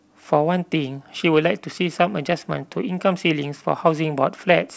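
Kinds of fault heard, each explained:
Nothing stood out on listening to the speech, which is limited to 8 kHz and below, as expected from a call path that points to a wideband G.722 codec.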